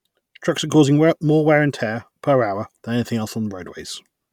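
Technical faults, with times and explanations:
No technical faults can be heard in this speech clip.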